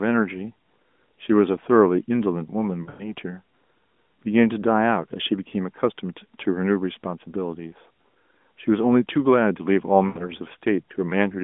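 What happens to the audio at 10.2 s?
Right around there you get lost AMR speech frames, from 10.08 to 10.28 s. The decoder stretches the last good sound, which smears and fades before recovering.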